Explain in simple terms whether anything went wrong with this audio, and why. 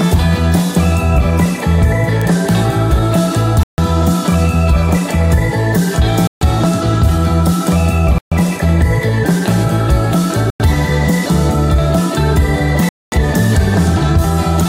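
A single sharp tick at 2.22 s is a bit error spike: one stored digital value flipped briefly, jumping by a power of two before snapping back. The sound cuts to silence five times, at 3.63, 6.27, 8.18, 10.50 and 12.89 s, for about a tenth to a quarter of a second each. These are Bluetooth stalls, likely from wireless interference delaying audio to the headphones.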